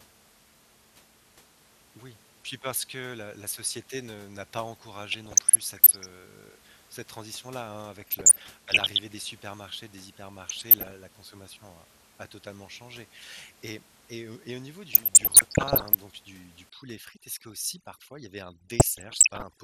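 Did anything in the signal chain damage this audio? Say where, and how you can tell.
Yes. At the codec stage, the speech sounds dull throughout, with a granular, gurgling edge, most likely from MP2 compression at a low rate, around 80 kbps. On a spectrogram the top end stops at a hard ceiling, and the upper sub-bands flicker on and off in blocks.

At the transmission stage there is DAB burbling: short blips of noise at 5.12–6.11 s, 8.01–9.0 s (just before "des supermarchés des"), 10.47–10.92 s, 14.93–15.95 s (between "et et au niveau" and "donc du du") and 18.80–19.42 s. Bit errors of around a percent or less reach the MP2 data and throw single sub-bands off level. On a spectrogram they show as isolated bright rectangles.

In the processing stage, overdone noise removal starts after "donc du du" at 16.70 s and runs to the end. The room noise, sitting about 18 dB below the speech, drops to near silence with twinkling specks. 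On a spectrogram the background goes black, with scattered isolated dots and ragged gaps cut into the speech harmonics.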